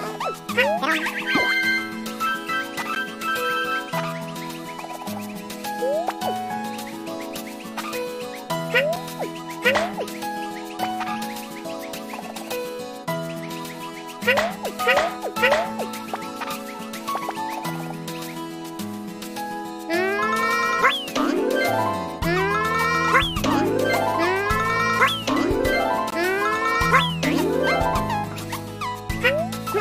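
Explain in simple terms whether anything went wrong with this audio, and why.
Three brief glitches interrupt the sound, at 2.95, 8.96 and 26.10 seconds. Each is a sharp tick or tiny dropout lasting about 12, 6 and 19 milliseconds. Each is a block of digital silence: a short run of the audio was replaced by silence, most likely because the program didn't deliver its next chunk of sound in time. The first two gaps fit buffers of 512 and 256 samples.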